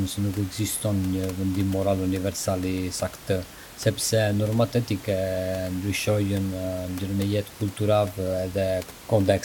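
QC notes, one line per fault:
No faults found.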